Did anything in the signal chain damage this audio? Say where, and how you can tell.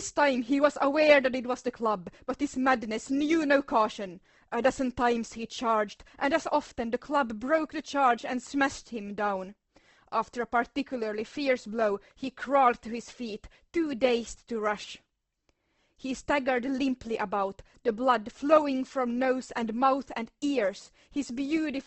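Yes, at the codec stage: the speech sounds grainy and rough throughout and stops at 8.2 kHz, likely Opus compression filling starved bands at a rate near 16 kbps.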